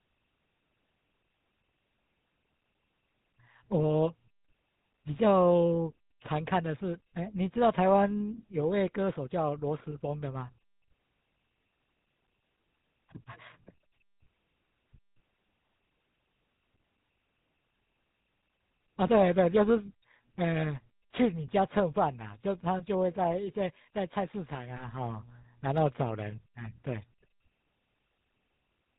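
Throughout the speech, the GSM full-rate codec is plainly audible. It models the vocal tract and drives it with a coarse pulse excitation, discarding everything above 4 kHz. The result is a buzzy, gravelly roughness and a dull top end, consistent with a 13 kbps full-rate encoding.

From 19.86 to 19.92 s, lost GSM frames disrupt the signal. The decoder holds the last good frame's parameters, so the sound briefly turns into a rough, metallic ring. The gap is short enough to fit a single missing 20 ms frame.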